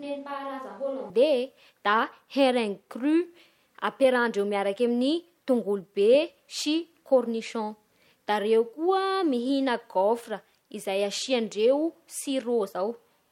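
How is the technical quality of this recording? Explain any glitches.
The recording has one glitch, at the very start. From the opening until 1.10 s, the speech sounds like a switch to a distant microphone. It is already under way when the clip begins. The sound is roomy and hollow, with thin bass. The level sits about 10 dB lower. Room noise sits roughly 30 dB below the speech. The likely cause is that the close microphone's feed was missing, so a farther microphone picked up more room and less voice. At 1.10 s the close sound returns abruptly.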